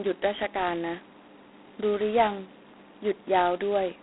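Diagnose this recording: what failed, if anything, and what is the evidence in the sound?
The codec stage failed: the speech carries G.726 ADPCM damage throughout, heavy enough to fit the 16 kbit/s mode. A harsh, rasping hiss rides on the speech and rises and falls with its level. The band is telephone-narrow, about 250 Hz to 3.4 kHz, with nothing above 3.9 kHz. Too few bits describe each sample's difference from the predicted value, so the coarse steps become audible grit. Steady channel noise would not track the speech level as this hiss does.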